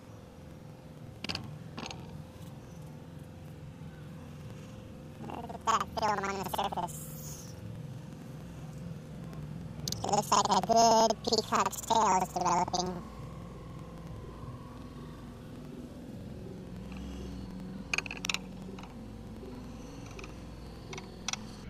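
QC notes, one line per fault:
Throughout: planar audio read as interleaved. Blocks holding all left samples, then all right, are read as alternating pairs, which fits 4096-sample blocks. Each 93 ms block plays twice at double speed, so the sound sits an octave high with a 10.8 Hz flutter.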